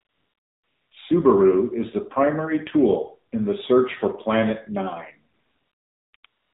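The AMR narrowband mobile codec is present throughout. Nothing above 4 kHz survives, and the speech sounds buzzy and synthetic, which fits a low rate near 7.4 kbps. AMR comfort noise fills the pauses. From 0.0 to 0.92 s, then 5.34 to 6.14 s, 6.16 to 6.24 s and 6.26 to 6.54 s, speech frames stop. Smooth synthetic noise replaces the real background and switches in and out.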